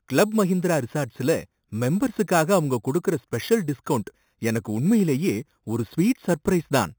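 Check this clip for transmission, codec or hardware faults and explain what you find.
One fault, running the whole way through: imaging from sample-and-hold upsampling. The speech sounds like it was brought up from about 8 kHz by simply repeating samples unfiltered, so mirrored copies sit from 4 kHz to 8 kHz at about -18 dB, giving a metallic fizz.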